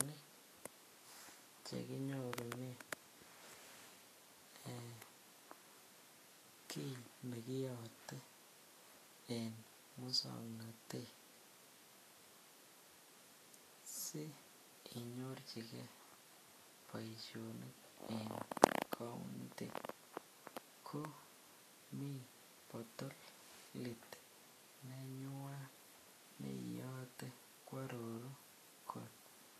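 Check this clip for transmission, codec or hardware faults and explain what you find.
There's one codec fault, and it runs through the whole clip. Vorbis compression is the likely culprit. Nothing above 14.2 kHz survives, and the treble below that cut-off is quantised so coarsely that its fine detail turns into noise. The speech comes across hissy and grainy, with roughened tone and blurred consonant attacks, which fits a low bitrate of around 36 kbps.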